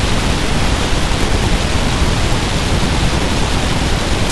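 Throughout, interleaved audio is read as planar in blocks of about 23.2 ms, likely 1024 samples, so the speech plays an octave low, doubled and choppy, pulsing near 43 Hz.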